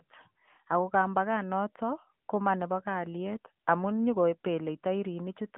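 Speech run through the AMR narrowband mobile codec for its whole length: the audio was squeezed into AMR-NB's 8 kHz world, with the line band confining it to roughly 150 Hz to 3.4 kHz and nothing surviving above 3.5 kHz. The coder rebuilds the voice from a vocal-tract model excited by sparse pulses, and the degree of plainly audible buzzy, synthetic colouring fits a mid-rate mode around 10 kbps, while the missing top end leaves everything dull and telephone-like.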